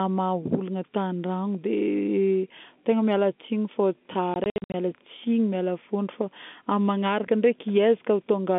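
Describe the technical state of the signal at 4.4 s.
At 4.4 s the speech is inside a burst of packet loss filled with silence from 4.34 to 4.74 s. About 220 ms of the 400 ms is dropped, with gaps of up to 60 ms consistent with 20 ms packets. The hard-edged holes chop the speech.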